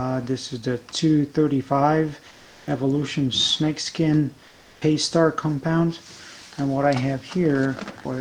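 From 2.27 to 2.67 s and again from 4.47 to 4.81 s, the background turns into a flat, featureless hiss, about 2 dB quieter the first time and level the second. This is comfort noise in place of the background, likely from Opus-style discontinuous transmission filling the pauses with synthetic noise.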